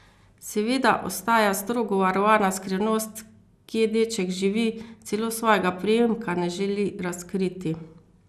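Generation loss runs through the whole speech clip: the sound is swirly, smeared and hollow, with consonant attacks blurred and nothing above 15.5 kHz. The likely cause is repeated lossy coding, the character pointing to an MP2-style codec at around 96 kbit/s applied about three times over. Each decode and re-encode lands on a shifted frame grid and quantises again, so noise and spectral gaps stack up beyond what one pass would leave.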